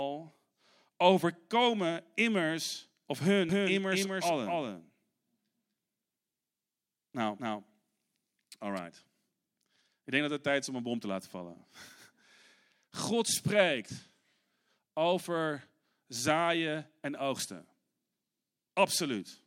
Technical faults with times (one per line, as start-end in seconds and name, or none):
3.49-8.79 doubled audio track